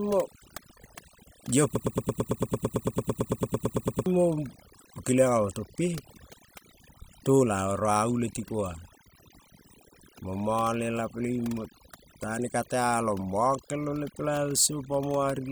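Overdone noise removal runs through the whole speech clip: a noise reducer set far too aggressively has pulled individual frequency bands down to nothing wherever they sat near its noise estimate, leaving a lowered background dotted with twinkling specks.

A broken-record loop occupies 1.75 to 4.06 s, where a 0.11 s fragment repeats exactly, back to back, 21 times. The likely cause is a stalled player, encoder or stream resending its last held fragment, so the speech due in that span is lost.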